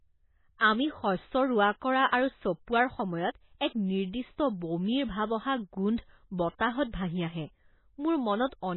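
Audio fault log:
Throughout: MP3 compression. Nothing is heard above 4 kHz, and the sound has a heavy watery, swirly quality. That fits a very low bitrate near 16 kbps, where the codec likely cut the treble and switched weak frequency lines on and off frame to frame.
0.58–0.61 s and 6.58–6.60 s: pre-echo. A short hiss runs ahead of a sharp attack, spreading about 31 ms and 20 ms. The codec smeared quantisation noise across its whole block, filling the quiet moment before each onset and softening it.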